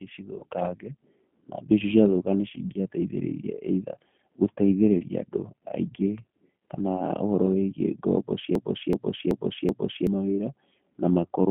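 Throughout, the speech carries the G.729 codec sound: an 8 kbit/s rebuild from a vocal tract model and sparse pulses, band-limited to roughly 150 Hz to 3.4 kHz. The damage is plainly audible as a rough, slightly synthetic, narrowband quality.

At 0.39 to 0.43 s there is VoIP packet loss concealed by the speech codec. About 20 ms of audio is missing, which fits a single lost packet. The decoder extrapolates from its last pitch and filter state, producing a brief, fading smear before the signal recovers.

From 8.55 to 10.07 s a broken-record loop repeats one 379 ms fragment exactly, back to back, four times. The stutter is mechanical and identical on each pass. It was likely caused by a stalled player or stream resending its last buffered piece, so the audio that belonged there is lost.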